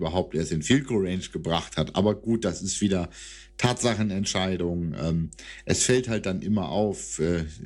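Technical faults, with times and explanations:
Throughout, mains hum: a ground loop or nearby transformer leaks the 50 Hz power line into the signal, leaving a steady low drone roughly 25 dB beneath the speech.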